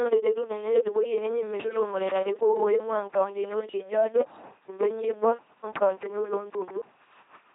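Speech run through an LPC-10 vocoder from start to finish, so it comes out as a heavily damaged, buzzy robot voice that fits a 2.4 kbit/s stream. Each instant gets either a pulse train or noise through a small all-pole filter, and nothing survives above 3.8 kHz.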